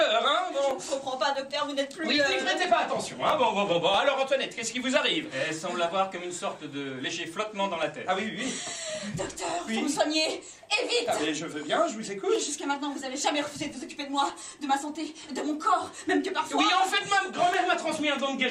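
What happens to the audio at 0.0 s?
Nothing goes wrong at 0.0 s; the audio is intact at that moment, with no dropout, click or other fault.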